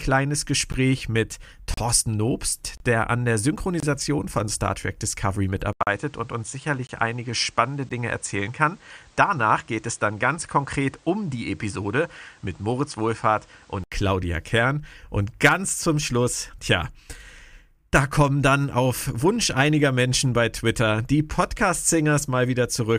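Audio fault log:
0.72, 1.74–1.78, 2.77–2.80, 3.80–3.83, 5.83–5.87, 6.87–6.89, 7.89 s: gap between stream segments. Hard-edged holes of roughly 15 to 40 ms, landing about once a second, which matches 1 s segments whose time stamps don't quite butt up, so the player drops silence into each seam. "der an der" sits neatly between the 2.77 and 3.80 s holes. Nothing is actually missing; the sound just stutters at each join.
5.73–13.92 s: input switched to a poorer device. After an 80 ms dropout the sound goes duller, with nothing above 9.8 kHz, and a new background noise appears roughly 35 dB under the signal, while loudness stays about the same. That's most likely the recording hopping to a narrower-band input such as another mic or a headset profile. At 13.92 s the original brightness and quieter floor come straight back.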